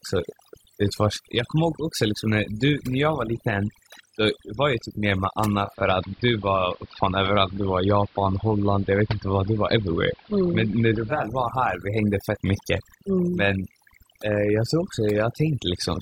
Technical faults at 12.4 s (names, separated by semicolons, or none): overdone noise removal